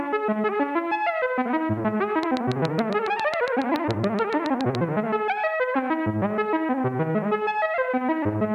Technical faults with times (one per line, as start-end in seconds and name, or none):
2.23-4.76 train of clicks